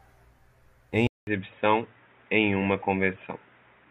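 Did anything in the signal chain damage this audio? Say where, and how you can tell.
Yes. An input switched to a poorer device at 1.07 s, at the driver or device-routing stage, and the degraded sound lasts to the end of the clip at 3.90 s. A gap of about 200 ms of silence marks the switch. After it the speech turns narrow and boxy, with nothing above 3.8 kHz, and a new noise floor sits roughly 40 dB below the signal. The overall level barely changes. The likely cause is the system handing capture to a band-limited microphone or a headset's call profile.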